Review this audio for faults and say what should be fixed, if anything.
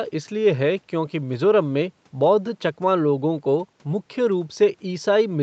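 Nothing needs to be fixed, as no faults turn up in this audio.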